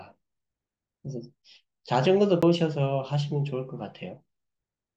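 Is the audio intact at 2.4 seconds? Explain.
No. At 2.42 s the speech suffers a CD skip: a knock or disc flaw sends the laser tracking to a different turn of the spiral, so playback mutes for roughly 10 ms, leaving a small tick, then carries on from another point on the disc. What separates this from an ordinary dropout is that the speech doesn't resume where it stopped. It lurches to a new position, forward or back, producing an abrupt discontinuity in the flow.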